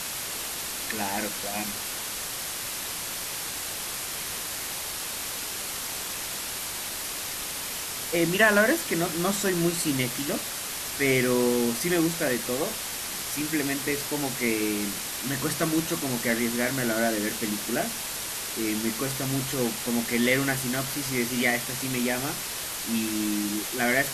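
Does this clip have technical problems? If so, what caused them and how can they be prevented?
Yes. From start to finish the speech sits under a loud, steady hiss caused by low bit depth with dither: the audio was reduced to about 4 bits, and random dither noise was added before each sample was rounded, so the coarse rounding error turns into even white noise rather than gritty distortion. Here that hiss is nearly as loud as the speech itself. On a spectrogram it shows as a uniform wash across all frequencies, and the waveform has a thick noise floor between phrases. To prevent it, keep recording and export at 16 or 24 bits.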